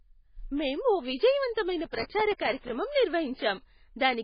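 Throughout the speech there is heavy codec damage, likely from MP3 compression at a very low bitrate in the region of 16 kbps. Nothing survives above 5 kHz, so the spectrogram shows a hard ceiling there, with blotchy patches switching on and off beneath it. The sound is watery and swirling.

From 1.84 s to 2.77 s a loose connector crackle breaks in as an irregular burst of scratching. The contact making and breaking rapidly chops the signal. On a waveform this shows as jagged, broken spikes, and on a spectrogram as scattered broadband vertical streaks.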